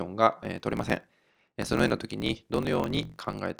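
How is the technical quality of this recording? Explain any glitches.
The recording is compromised by a block size mismatch (truncated) from 0.41 s to the end. Each block's tail is discarded, which fits a 1024-sample read. The result is a 46.9 Hz buzz and speech running 1.12 times fast. A spectrogram shows evenly spaced vertical striations, and the waveform shows regular splice discontinuities.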